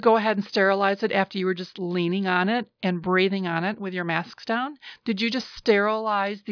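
A short piece of speech, and there's nothing technically wrong to flag anywhere in it.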